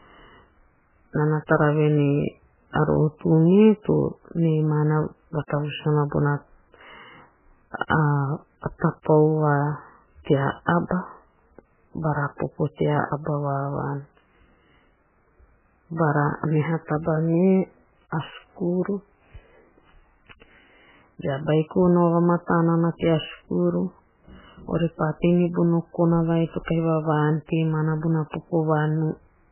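Speech that's been squeezed hard, with MP3 compression the whole way through: nothing above 3 kHz, watery swirling on the voice, smeared consonants, likely from a starved bitrate near 8 kbps.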